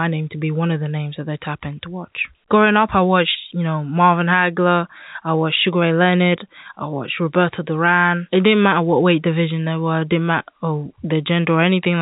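No faults found; the speech carries the expected G.711 telephone band with nothing above about 3.8 kHz.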